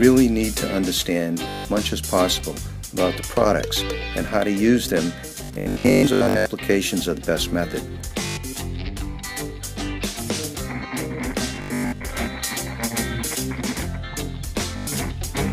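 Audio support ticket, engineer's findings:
Bluetooth stutter at 1.49–1.65, 5.44–6.46, 8.27–8.37, 11.56–12.05 and 14.77–14.87 s. Packets lost or late on the wireless link: the receiver loops its last buffer, giving a buzzy repeat, then jumps ahead. Worst at 5.44 s, about 0.73 s lost.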